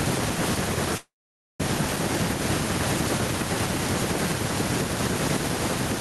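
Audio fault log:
0.97 to 1.63 s, call audio freeze: The speech stops and the last sound carries on briefly as a fading buzz or hiss. Then there is about half a second of silence before the speech resumes. The pause lasts about 0.62 s. Nothing is lost, since the audio continues from exactly where it stopped. The likely cause is packets held up in transit, which let the jitter buffer run dry. Everything after this point plays about 0.62 s later.
1.96 to 1.99 s, skip ahead: The speech jumps forward with almost no gap. Roughly a third of a second of audio is gone. The two sides of the cut meet nearly directly, so the sound lurches instead of pausing. The jump also takes back much of the delay the earlier freeze added. Later audio was already waiting, so the dropped stretch was discarded and playback went straight on. The faint room noise, some 33 dB below the speech, continues across the join.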